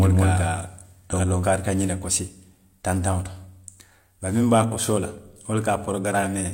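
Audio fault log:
0.00 to 1.47 s, doubled audio track: The speech is already heard twice when the clip opens. A second copy trails the first by about a fifth of a second. It is roughly as loud as the original, so neither copy dominates. The copy is full-band and clean, with no decay or room colour, so it cannot be an echo. The likely cause is the same signal being captured again through a slower path. At 1.47 s the copy stops abruptly.
1.09 to 1.13 s, damaged data in a compressed stream: A short glitch cuts in during the doubled section. Part of the compressed data here was wrong, so the decoder could not read those frames properly. It lost sync and searched for the next valid frame header. The disruption during that search is the glitch you hear.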